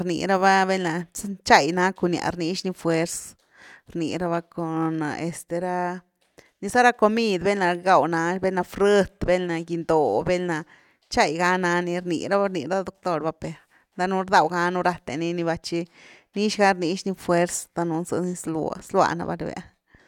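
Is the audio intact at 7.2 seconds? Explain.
Yes, the speech at 7.2 seconds plays through cleanly, with no audible dropout, click, distortion or other fault at that moment.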